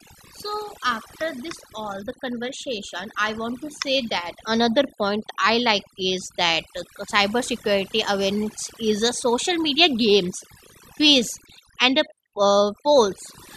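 Throughout the speech, overdone noise removal pulls frequency bands near the noise estimate far down, leaving near-silent gaps with twinkling specks.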